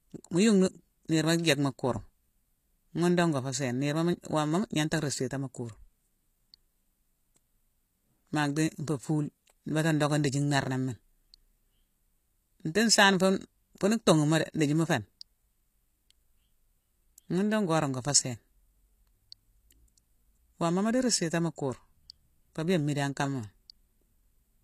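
A speech recording whose upper frequencies sound synthetic and metallic for its whole length, with s sounds coming out gritty and lispy, and nothing at all above about 14.9 kHz. The likely cause is HE-AAC compression, plainly audible here and consistent with a low bitrate of around 24 kbps. That codec spends its bits on the lower spectrum and fakes the treble by copying lower bands upward under a coarse envelope. Those copied harmonics fail to line up with the real ones, which produces the artificial top end.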